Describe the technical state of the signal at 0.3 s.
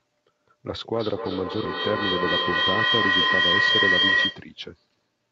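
At 0.3 s the speech is intact, with no fault at that moment; what can be heard is simply the normal band limit of the call path, with nothing above about 8 kHz.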